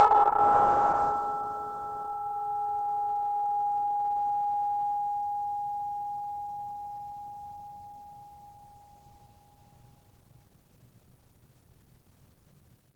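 A music clip with plainly audible Opus compression throughout, likely from a low-rate hybrid-mode encode near 16 kbps: tones sound grainy and hoarse, and a spectrogram shows noise-filled bands up to a 20.1 kHz ceiling.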